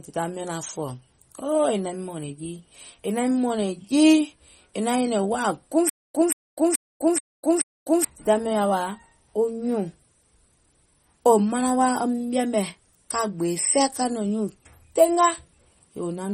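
From the start and throughout the whole clip, the speech carries plainly audible MP3 compression, most likely from encoding at a low bitrate that points to around 32 kbps. With so few bits, weak frequency components are dropped and return from frame to frame, giving a watery, swirling texture with metallic chirps on s sounds and smeared consonant onsets. On a spectrogram, the energy breaks into patchy, flickering blocks, and nothing appears above a hard ceiling at 16 kHz.

Right after "wàà guùŋ", from 5.89 s to 8.05 s, comes a stutter with silent gaps, likely from a stalled player or stream retrying. The same 179 ms fragment plays 5 times, each followed by about 252 ms of silence, so it repeats every 430 ms at a steady pace, and the audio that belonged in that span is lost. The waveform shows identical blocks separated by near-flat stretches, and the spectrogram shows matching vertical slices with empty columns between them.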